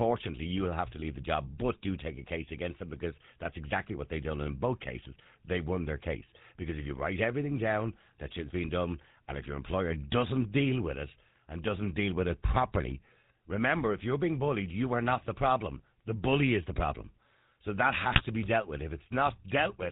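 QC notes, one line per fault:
11.68 to 11.70 s, loud pop: a single sharp pop, about 10 dB above the speech, lands between "deal with it and" and "deal with it properly". A sudden voltage step, likely from a plug, switch or static discharge, was added to the signal and shaped by the circuits downstream. The speech carries on intact underneath, which separates it from a decoder fault. Nothing in the voice itself is bent or garbled, and it lasts about 20 ms.
18.12 to 18.25 s, GSM bit errors: just before "be dealt with", the voice breaks into squawks and gargling for about 130 ms, which fits roughly six consecutive 20 ms frames reaching the decoder with flipped bits. The rate points to a weak link flipping around 2 percent of bits. Corrupted filter, pitch and gain values twist the spectrum and jolt the level frame by frame. Unlike the earlier pop, the speech itself is mangled rather than having a click laid on top.
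Throughout, GSM full-rate codec: the whole clip carries a steady buzzy, gravelly roughness, and nothing is heard above 4 kHz, which fits a 13 kbps full-rate stream. The codec rebuilds speech from a vocal-tract filter excited by regularly spaced pulses, keeping only every third excitation sample, and that sparse excitation produces the buzz. The damage is plainly audible. That steadiness separates it from the short burst of bit errors near the end.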